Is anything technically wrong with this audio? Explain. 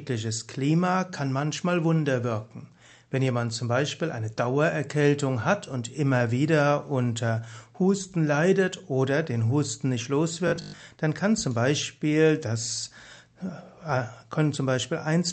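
Yes. From 10.48 to 10.84 s the sound turns to a rigid metallic 50 Hz buzz, likely robotic sound from repeated short buffers: 20 ms chunks replayed over most of the stretch. The waveform shows identical repeating cycles, and the spectrogram shows evenly spaced harmonic lines at 50 Hz intervals. The call path's Opus coding caps content at 8 kHz.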